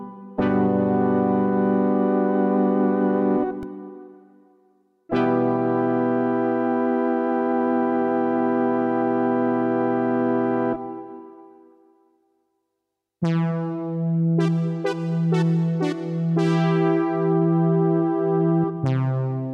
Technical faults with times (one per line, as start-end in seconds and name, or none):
3.63 repeated buffer